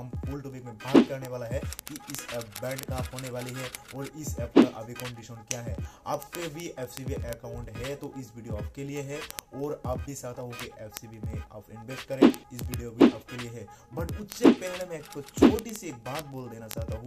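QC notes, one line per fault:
0.11–17.06 s, word clock ticks: a fast, steady train of sharp ticks of uneven strength, about every 20 ms (around 50 per second), hundreds in all. The receiving device runs on its own clock, off from the sender's by roughly a thousandth. Each time the clocks slip past each other, a single sample is dropped or repeated. Unlike buffer dropouts, only single samples go missing and there are no gaps. The strict regular rate separates them from random clicks.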